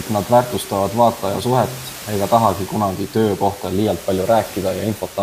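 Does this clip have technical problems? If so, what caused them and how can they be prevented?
No, there's nothing here to fix, just a bit of room noise sitting about 15 dB under the speech, which comes with the recording space rather than the system.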